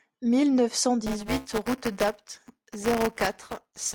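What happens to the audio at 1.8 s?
At 1.8 s the speech is in a stretch of buffer tearing, running from 1.07 s to the end. Writer and reader overlap, replaying audio from about 10 ms earlier, producing a 200 Hz robotic buzz.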